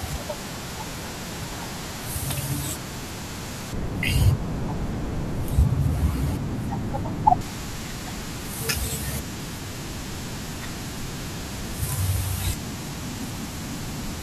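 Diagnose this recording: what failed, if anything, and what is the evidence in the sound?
From 3.73 to 7.41 s the speech goes dull and muffled, with the top end sloping away smoothly to about 11 dB down at 10 kHz relative to 1 kHz. That's de-emphasis applied wrongly in a processing stage: a treble cut meant to undo pre-emphasis, hitting audio that never had any or applied a second time.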